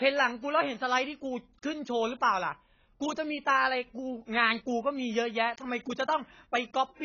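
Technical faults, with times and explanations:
Throughout, AAC compression: likely low-bitrate AAC-LC coding, fitting about 16 kbps, strips everything above 6.8 kHz and heavily smears the speech, leaving it dull.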